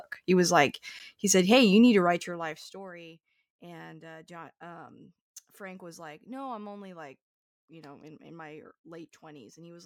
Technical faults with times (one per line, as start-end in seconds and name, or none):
1.87-2.93 zipper noise